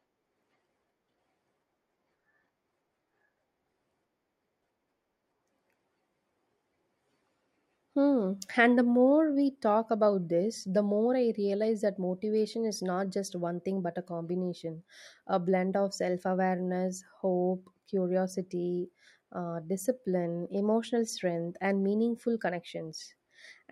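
No technical faults can be heard at any point in the speech recording, and the signal stays continuous and stable throughout.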